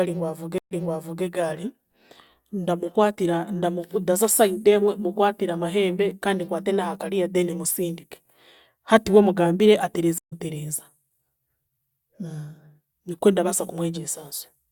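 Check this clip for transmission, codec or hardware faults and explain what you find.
Two transmission faults are present, both stream reconnects. At 0.58 to 1.24 s and at 10.18 to 10.33 s (just after "we mugambire"), the connection dropped and the player restarted its decoder mid-stream. Each leaves a silence of about 130 ms. The first resumes roughly half a second earlier, repeating audio. The second resumes slightly later, skipping a short stretch of about 150 ms.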